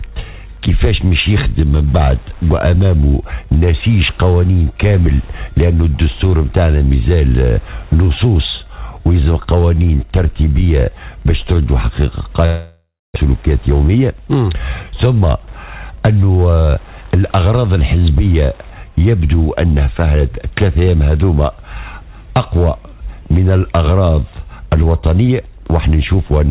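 From 0.0 to 18.76 s a steady tick runs under the sound, repeating every 102.4 ms, about ten times a second, at around 35 dB below the signal. This is Wi-Fi interference: a nearby radio's beacon bursts are being rectified by the audio circuit.

At 12.46 s the sound gives way to a fading, buzzy continuation of itself, followed by about 0.27 s of silence before audio resumes at 13.18 s. Roughly 0.4 s of material never returns. The likely cause is a long network dropout, with the receiver concealing the gap.

From 13.25 to 16.37 s the audio runs about 9% fast with unchanged pitch and sounds hurried. This is a jitter buffer speed-up: after the outage added roughly 0.3 s of delay, the receiver repeatedly removed pitch-period-length slices, about 0.3 s in total, to catch up. Throughout the clip, nothing is present above 4 kHz, which fits narrowband G.711 mu-law at 64 kbps.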